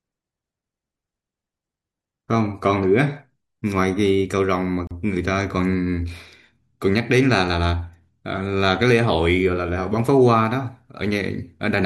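A brief hole of silence, about 36 ms, opens in the speech at 4.87 s, with its edges softened, before the sound resumes where it stopped. This is a gap at a join of encoded pieces: separately encoded segments were spliced untrimmed, leaving encoder delay and final-frame padding in place.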